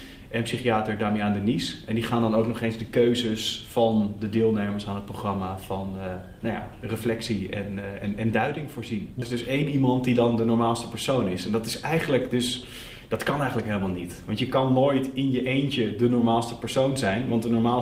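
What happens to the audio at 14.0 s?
Nothing goes wrong at 14.0 s; the audio plays through that moment intact, with no dropout, click, distortion or other fault.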